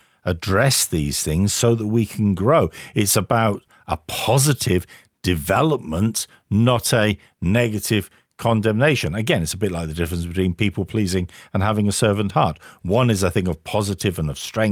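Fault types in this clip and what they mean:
No technical faults are audible in this speech recording.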